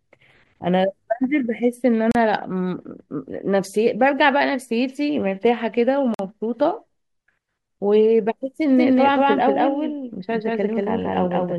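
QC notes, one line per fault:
2.12–2.15 s and 6.14–6.19 s, gap between stream segments. The speech drops to silence for 35 ms, then 49 ms, with hard edges. The holes sit at 4 s segment joins, where timestamps leave space the player pads with silence. No audio is lost.
8.77 s to the end, doubled audio track. A second full-band copy of the speech runs about a fifth of a second behind, at roughly equal level. It has no decay or room colour and starts abruptly. This likely comes from a second, slower capture path.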